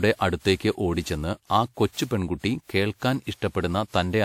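Across the whole speech recording the sound is swirly and hollow, with a smeared, watery texture and softened consonant attacks. Nothing is present above 19.2 kHz. This is generation loss, likely from the audio being encoded and decoded through a lossy codec about seven times. The character fits WMA at around 96 kbit/s. Each pass requantised on a shifted frame grid, so the noise piled up.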